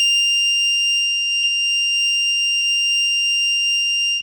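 At 1.43 s and again at 2.61 s the music jumps forward by roughly 40 ms, consistent with compressed frames skipped: about two 20 ms frames never reach the output.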